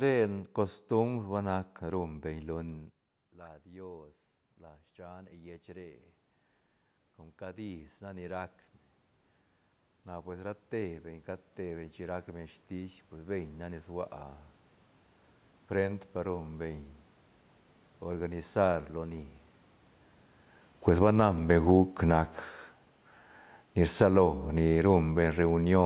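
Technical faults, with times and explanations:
1.95–21.95 s, automatic gain rising: The voice drops about 18 dB after the talker moves away near 2.5 s. The automatic gain control sees a quiet input and slowly adds about 16 dB. Voice and room noise swell together over many seconds.
18.57–25.85 s, automatic gain falling: The level is now too high for the gain. The gain control backs off gradually. The loud voice sinks, and the room noise sinks with it, until the clip ends.
24.11–24.57 s, automatic gain rising: A short upward correction of about 6 dB interrupts the fall. Voice and background lift together for about half a second. The narrow call band, with nothing above 4 kHz, stays the same through the change.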